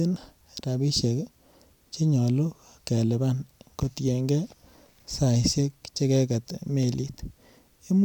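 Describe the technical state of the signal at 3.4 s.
At 3.4 s the speech signal is intact, with no fault present at that moment.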